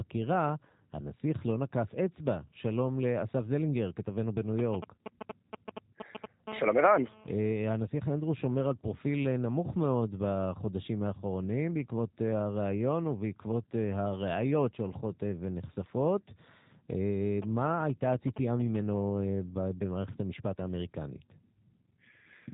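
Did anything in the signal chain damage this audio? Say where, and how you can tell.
Yes. The G.729 codec stage, running at 8 kbit/s, rebuilds the speech from a model, so it sounds rough and synthetic throughout, with nothing above 3.8 kHz.

Analogue wiring rectified a nearby phone's GSM signalling bursts, producing a galloping dit-dit-dit of short 217 Hz buzzes from 4.59 to 6.48 s, roughly 5 dB below the speech, and again from 17.42 to 18.76 s, roughly 10 dB below.

The same wiring then picked up a steady GSM phone buzz as the phone held a call. A hard, raspy 217 Hz buzz, about 16 dB below the speech, runs from 6.48 to 7.52 s.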